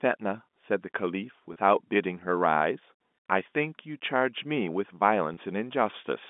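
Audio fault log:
1.53–1.56 s and 5.34–5.37 s, packet loss with pitch repetition: each gap of about 30 ms, which fits a single lost packet, is bridged by repeating the last pitch period. So the sound briefly holds with a slight buzz instead of dropping out, over the narrow G.711 telephone band.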